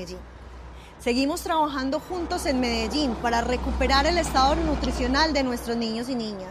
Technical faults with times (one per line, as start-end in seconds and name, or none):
none